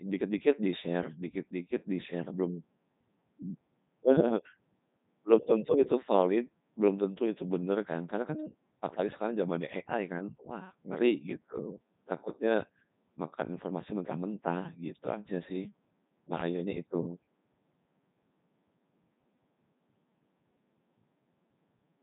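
The speech has passed through the Codec 2 vocoder throughout, which fits its top 3.2 kbit/s mode. Only pitch, voicing, energy and a spectral envelope survive, then get resynthesised from sine waves, leaving a heavily robotic, buzzy voice with nothing above 3.8 kHz.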